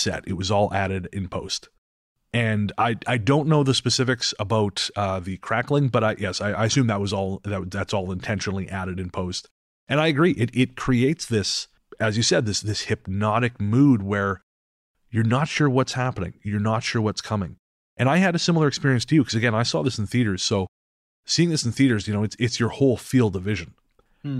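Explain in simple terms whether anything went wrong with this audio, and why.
Nothing went wrong here: at no point in the speech is there an audible technical fault.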